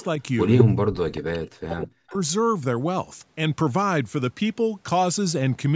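Right at the start, from 0 to 0.04 s, there's a faint trace of a delayed copy of the speech, very low under the main signal. It comes back much harder between 0.46 and 0.64 s, this time roughly as loud as the talker. That's an echo leak. A copy trailing by about 205 ms is most likely loudspeaker sound getting past the far end's echo canceller and returning down the line, so you hear the speech doubled on itself.

Overlapping that, from 0.61 to 2.16 s, the talker's speech sinks away in chunks, at its worst almost to silence, for about a second and a half in total. That pattern points to speech suppressed in double talk. When both sides were talking at once, the echo canceller likely couldn't tell the near talker from the returning echo, so it pulled both down and the speech cuts in and out. The top end stops at 8 kHz throughout, which is the normal band limit of the call processing.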